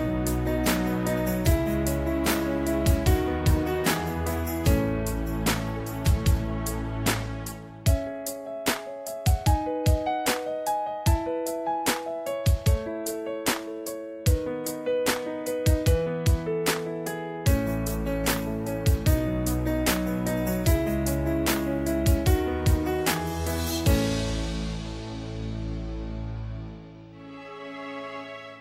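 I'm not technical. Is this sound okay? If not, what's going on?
Yes, this sound is okay, and there's nothing going on with it that needs fixing.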